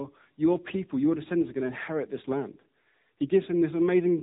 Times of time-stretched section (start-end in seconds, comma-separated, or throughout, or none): none